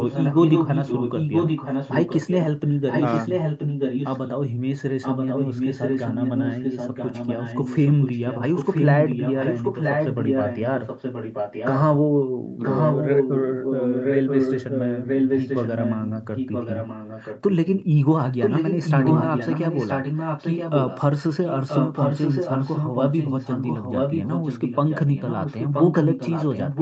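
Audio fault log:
0.00–2.38, 2.68–4.33, 5.01–11.82, 12.63–17.53, 18.20–21.01 and 21.40–26.82 s, echo leak: A second copy of the speech trails the original by about 0.98 s. Through the first five stretches it is roughly as loud as the speech itself. In the last it sits a little lower. The likely cause is a loudspeaker on the far end whose echo canceller let the sound its microphone picked up pass back into the call.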